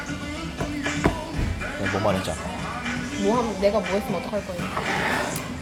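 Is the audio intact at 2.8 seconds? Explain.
Yes, the audio is intact at 2.8 seconds, with no fault present at that moment.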